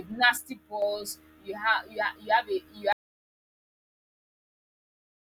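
From 0.37 s to 0.82 s, the speech drops abruptly by about 6 dB and then returns. This is most likely one channel dropping out. One side of a stereo pair went missing, and the mono sum kept only half the shared signal. Anything present only in the lost side vanishes for that half second. The step down and back up is sharp, not faded.

At 2.93 s, the audio drops out to silence and stays silent to the end. There is no room tone at all, only silence. The speech stops mid-flow without any decay. The likely cause is a lost input, such as a disconnected device, a failed link or a stray mute, while recording carried on writing silence. Whatever followed is gone.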